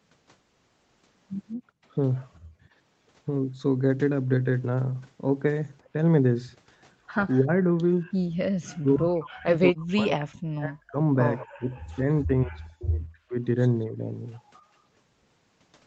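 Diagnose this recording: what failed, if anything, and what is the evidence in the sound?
The echo canceller in the call processing clamped the microphone while far-end audio played, gating the background. The room sound drops out from 1.55 to 1.85 s, by about 28 dB, and again from 2.4 to 2.69 s, by about 19 dB, returning once the canceller releases.

During double talk, the canceller's suppressor likely mistook near-end speech for loudspeaker echo and attenuated it. The speech dips briefly at 7.38–7.5 s, by roughly 20 dB, then is pushed down by roughly 40 dB across 8.79–10.99 s and, in pieces, across 11.52–13.36 s.

An echo leak at the far end, likely from a loudspeaker whose canceller failed to remove everything its microphone picked up, sends a delayed copy back. It appears at 11.38–11.47 s as a short scrap trailing by 209 ms, roughly 15 dB below the speech, within the 8 kHz Opus band.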